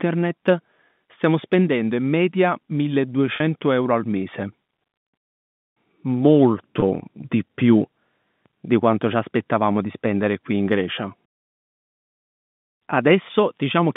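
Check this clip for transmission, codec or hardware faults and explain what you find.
There are two short dropouts, both packet loss with pitch repetition, heard over a G.711 telephone line whose band stops near 3.6 kHz.

Packet loss with pitch repetition at 3.36–3.40 s, just before "euro al mese", and at 6.80–6.82 s, just before "di più". About 40 ms and 20 ms went missing, which fits two packets and one packet of 20 ms each. The receiver filled each gap by repeating the last pitch period, so the sound briefly holds as a buzzy note. On a waveform this shows as identical repeated cycles. On a spectrogram it appears as flat, unchanging harmonic stripes.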